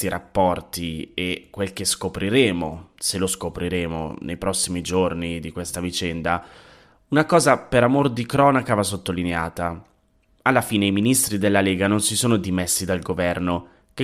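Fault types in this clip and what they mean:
Nothing to flag here: no technical faults turn up anywhere in this speech recording.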